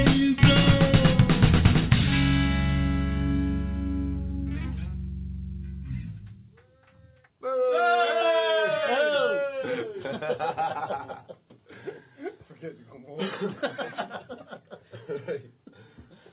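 No technical faults can be heard; the audio carries the character of a narrowband call path, with nothing above 4 kHz, which fits G.711 mu-law coding at 64 kbps.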